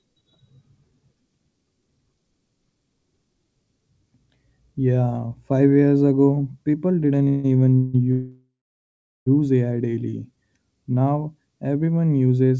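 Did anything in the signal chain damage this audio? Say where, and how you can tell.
Yes. At the network and jitter-buffer stage there are call audio freezes after "years ago people didn't" at 7.28–7.46 s, and after "ago people didn't even" at 7.76–7.96 s and 8.12–9.28 s. Each holds the last sound as a fading buzz. The longest one decays to about 0.74 s of silence. On a spectrogram this looks like a smeared, frozen band that ends in blank space. The likely cause is delayed packets draining the buffer, and the speech then resumes intact.

A jitter buffer slow-down follows at 9.91–10.49 s. Single pitch periods are repeated to rebuild the reserve. This adds about 61 ms and plays the speech at 91% speed with unchanged pitch. On the spectrogram the harmonics keep their spacing while the formants look stretched, and the waveform shows repeated identical cycles. Through the G.722 path, nothing above 8 kHz is present.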